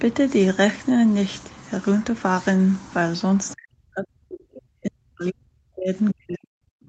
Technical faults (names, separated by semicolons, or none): other side's voice leaking through; speech suppressed in double talk